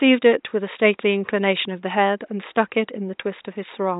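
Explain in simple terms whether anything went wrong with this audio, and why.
Nothing stood out on listening; the faint background noise of the room sits well below the speech and comes from the room itself, not from anything going wrong with the recording.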